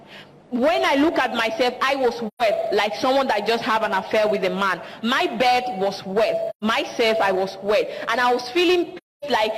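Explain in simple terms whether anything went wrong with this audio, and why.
Three short gaps drop the sound out, at 2.27 to 2.42 s, 6.50 to 6.64 s, and a longer one at 8.96 to 9.25 s. That's AAC frame loss with muting: chunks of the encoded stream went missing, so the decoder played silence in their place. The first two gaps are about 128 ms each, roughly three frames' worth, and the last is about 256 ms. The overlapping frames fade the sound down and back up, so each gap is a soft-edged hole.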